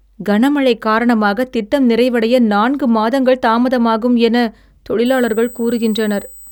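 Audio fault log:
5.06–6.52 s, USB whine: a steady high-pitched whine at 8 kHz, strongest at its 16 kHz multiple, rises about 20 dB below the speech and holds fixed in pitch until the end. The USB bus draws current in 125 microsecond microframes, an 8 kHz rhythm, and those pulses leak through the shared power or ground into the audio path, producing a tone locked to the bus timing rather than to the sound.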